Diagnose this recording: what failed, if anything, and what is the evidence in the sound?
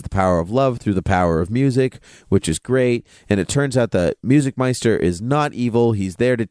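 Nothing in this recording points to a failure at any stage of the chain. The speech carries no audible sign of a fault from capture to playback.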